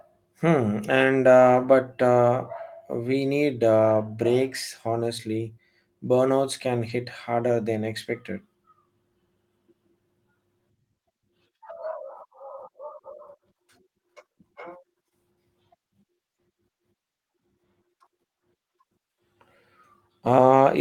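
Speech with two brief lost packets rebuilt from error correction, at 3.89 s after "but uh we need" and 6.89 s after "burnouts can". Each 20 ms stretch sounds rougher and noisier rather than silent or smeared, unlike a dropout or packet-loss concealment, because a low-bitrate backup copy filled it.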